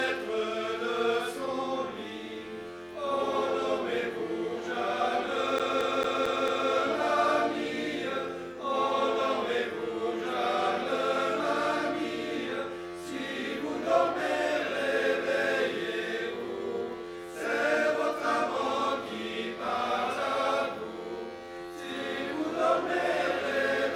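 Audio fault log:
5.59–6.70 s: CD stuck on one turn. A 0.22 s stretch repeats five times, each jump muted briefly, as the laser falls back one track.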